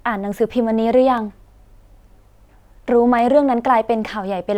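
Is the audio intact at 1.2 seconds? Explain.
No, there is a single sharp click at 1.18 s, likely from dropped samples: a fraction of a millisecond of the speech is skipped, so the waveform jumps abruptly.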